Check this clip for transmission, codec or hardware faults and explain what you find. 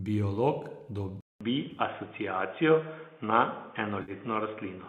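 Three faults are audible: one device change and two short dropouts.

From 1.21 s the speech turns dull and boxy after a 200 ms silence, with nothing above 3.6 kHz, a level shift of around 5 dB and a new noise floor roughly 35 dB down. This is likely an input switched to a poorer device, such as a narrower-band microphone or a headset's call profile.

At 1.71 to 1.80 s there is a smeared, phasey patch spread over 80 ms, with the longest gap near 20 ms. At 4.02 to 4.12 s a 60 ms stretch goes noisy and hollow. Both are AAC frame loss with concealment: the decoder rebuilds the missing audio from the last good spectrum. The first fits about 50 ms of lost 10 ms frames, the second about 60 ms.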